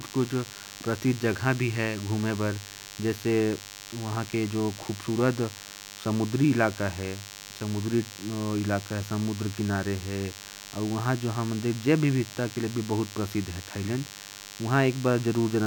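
A thin, steady buzz runs under the speech throughout, fairly prominent against it. This is DECT cordless phone buzz: a nearby handset or base sending radio bursts every 10 ms, rectified into 100 Hz with many harmonics.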